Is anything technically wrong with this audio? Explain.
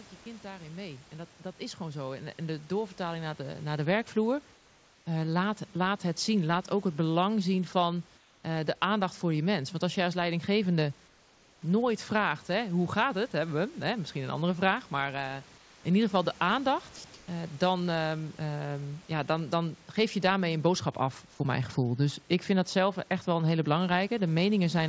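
Yes. From 0.22 to 3.98 s, automatic gain rising lifts speech and room noise together by about 17 dB. The slow swell of both at once sets it apart from a speaker simply getting louder.

Comfort noise replaces the background at 4.54–5.06, 8.18–8.44, 11.08–11.62, 15.58–15.84 and 17.14–17.28 s. The pauses turn into steady, featureless hiss, mostly about 2–3 dB quieter, with none of the room's texture. This is likely discontinuous transmission muting the sender. Unlike dropout silence, the gaps never go dead.

Sound dropped by the voice detector at 16.96–17.04 s cuts off roughly 50 ms of speech and fills the gap with that same noise, likely because the detector took quiet speech for background. Comfort noise in a pause removes no speech, but here speech actually goes missing. Throughout, the call path leaves nothing above 8 kHz.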